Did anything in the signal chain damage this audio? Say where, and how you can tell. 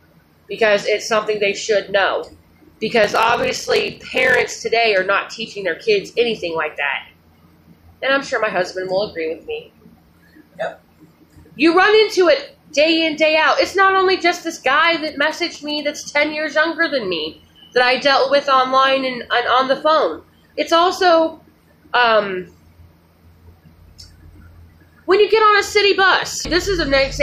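Yes. From 3.02 to 4.52 s, a buffer-stage block size mismatch pads each block with silence, giving a 43.1 Hz buzz and 0.861x speed, consistent with 1024-sample reads.

From 14.84 to 15.8 s there are GSM signalling bursts in the analogue wiring: a nearby phone's galloping ticks and 217 Hz buzz, roughly 25 dB under the audio.

At 26.45 s there's a brief blip from damaged data in the compressed stream. The decoder misreads corrupted frames and has to resync.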